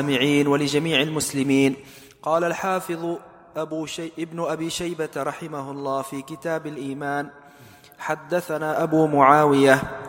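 From 8.58 to 9.04 s a level change of roughly 10 dB is applied in unsmoothed jumps of about 2 dB, around fifteen a second. Each jump leaves a tiny click, so a rapid ticking, classic zipper noise, rides on the sound as it moves.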